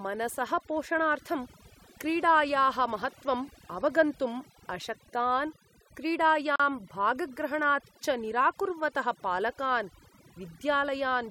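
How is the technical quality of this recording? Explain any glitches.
The recording has two technical faults: heavy-handed noise reduction across the whole speech clip, and one short dropout.

Overdone noise removal, throughout: the noise reduction was set so aggressively that it cuts individual frequency bands whenever they sit near its noise estimate. Quiet parts of the voice are removed along with the noise. The background becomes near silence sprinkled with twinkling specks.

Gap at a join of encoded pieces, from 6.56 to 6.60 s: separately encoded segments were joined without trimming each encoder's start-up delay and final-frame padding. That leaves a 39 ms hole in continuous speech with smeared edges. The sound then resumes where it stopped.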